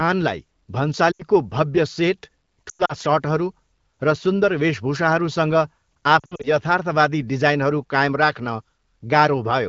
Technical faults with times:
1.11-1.22 lost AMR speech frames
2.69-2.95 lost AMR speech frames
6.19-6.51 lost AMR speech frames

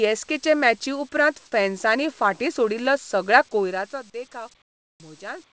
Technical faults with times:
4.62-5.00 comfort noise in place of the background
4.96-5.00 onset clipped by the voice detector

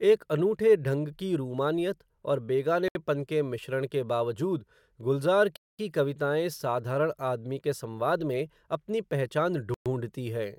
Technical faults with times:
2.88-2.95 Bluetooth stall
5.56-5.79 Bluetooth stall
9.74-9.86 Bluetooth stall

